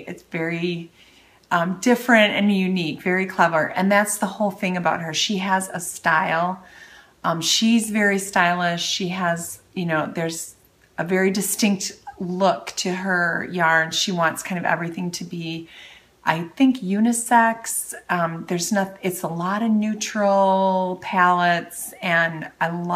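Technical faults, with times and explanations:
No technical faults detected.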